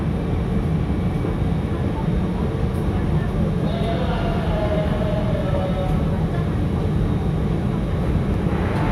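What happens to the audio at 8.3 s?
At 8.34 s there is a tiny jump forward in the sound, most likely a dropped buffer (overrun): the capture side failed to collect its samples before the hardware overwrote them, so a couple of milliseconds are lost and the audio on either side is butted together. What separates this from a dropout is that no silence is inserted. The sound simply skips ahead at a hard splice.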